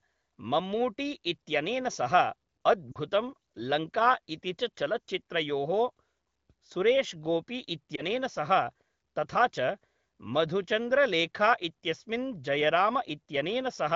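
Around 2.91 to 2.98 s there's a brief drop toward near silence, and at 7.95 s a quicker dip. Both are lost AMR speech frames. The AMR-WB decoder repeats the last good pitch and vocal tract settings at falling gain, which fits two 20 ms frames first, then one.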